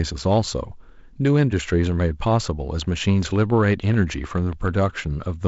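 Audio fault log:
3.22–4.69 s, train of clicks: about ten same-shaped ticks at a steady 6.9 per second, peaking about 5 dB above the speech and cutting clearly through the wideband G.722 sound. That's likely interference from nearby equipment or a struggling interface injecting pulses.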